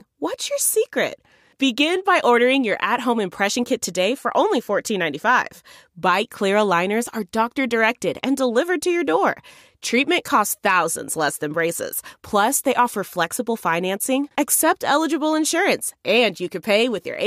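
The speech recording has no audible technical faults anywhere in its signal.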